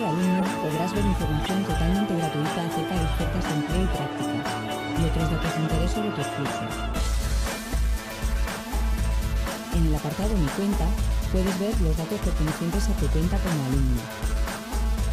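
Brief chirping blips at 0.38–0.43 s, 1.46–1.49 s and 10.73–10.77 s: corrupt frames decoded, bit-flipped data spraying energy at wrong frequencies, peaking about −15 dBFS (about −20 dBFS for the last).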